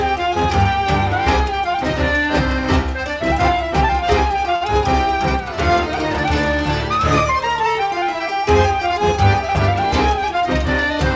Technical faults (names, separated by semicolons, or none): short stall from a late packet